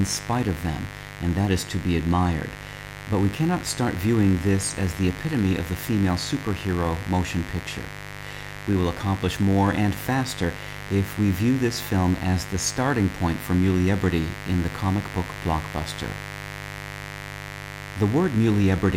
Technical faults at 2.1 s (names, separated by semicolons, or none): mains buzz